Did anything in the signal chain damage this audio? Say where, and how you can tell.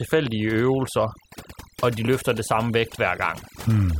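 Yes. The damage happens at a processing stage, where an overdone noise removal step was set far too strong. It affects the whole clip. Between phrases the background drops away, broken by twinkling specks. The suppressor tracks a noise estimate and cuts each frequency band that sits near it. Quiet parts of the speech fall near that estimate too, so they get pulled down with the noise.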